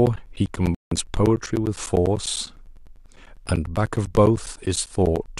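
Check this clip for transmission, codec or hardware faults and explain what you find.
Two faults are present in this speech clip.

From 0.06 s to 5.27 s there are periodic USB or driver dropouts. Every 0.1 s, a short slice of audio goes missing. Each gap lasts roughly 10 ms and is filled with silence. Something in the system stalls the USB bus or the audio driver on a fixed schedule. The stream starves briefly each time. The result is a steady train of ticks, about ten per second, heard only while speech is present.

From 0.75 s to 0.92 s there is a digital broadcast dropout. The receiver stopped getting usable frames and muted its output. It resumed only once clean data returned. The hole lasts 168 ms, which fits about seven lost frames. Whatever was transmitted in that span is gone, not delayed. It sounds like a drop to silence, then the speech picks up again mid-flow.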